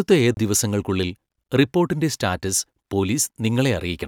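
At 0.34 to 0.37 s the speech breaks with a silence of roughly 30 ms, after which the sound resumes from a different point, so the flow of the speech jumps abruptly rather than continuing. This is a CD skip: the laser was knocked or thrown by a flaw onto another turn of the disc's spiral track, the player muted momentarily while it relocked, and playback carried on from the new position.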